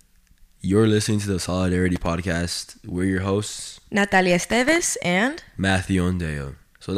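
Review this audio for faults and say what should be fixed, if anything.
Loose connector crackle appears at 1.96 to 2.07 s and again at 4.50 to 4.79 s. Both are irregular bursts of scratchy crackle, where a worn or dirty contact in the cable path briefly made and broke connection, chopping the speech signal on and off. To prevent it, clean or replace the suspect connector and secure the cable so it cannot shift during recording.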